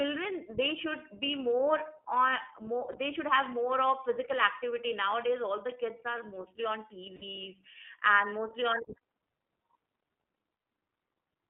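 Speech, carried throughout by the iLBC codec: nothing survives outside a telephone band of roughly 300 Hz to 3.4 kHz, and the plainly audible coding damage gives every syllable a rough, slightly synthetic grain, which fits iLBC's 15.2 kbps mode with 20 ms frames. This is not simple band-limiting, which would sound dull but smooth; the graininess comes from the excitation being rebuilt frame by frame. There are two spots of lost iLBC frames, at 2.92 to 2.97 s (20 ms) and 7.16 to 7.24 s (60 ms). In each gap the decoder repeats the last pitch cycle mixed with noise, so the sound becomes a brief, held, buzzy vowel, longer and fading at 7.16 s. Unlike a plain dropout, there is no silence or click. Unlike loss in codecs that carry state from frame to frame, the audio sounds right again immediately after each gap, because every iLBC frame is decoded on its own.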